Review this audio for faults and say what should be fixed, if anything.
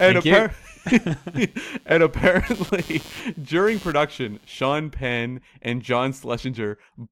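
Computer activity noise runs from the start to 4.63 s. It is a buzzing, scratching layer with a pulse rate of roughly 150 Hz. It sits about 25 dB below the speech. It follows the computer's workload, not the speech. Changing processor, graphics or mouse load shifts the ground that the audio circuit shares. That shifting ground rides into the signal. To prevent it, record through an isolated or external USB interface, or use a ground-loop isolator.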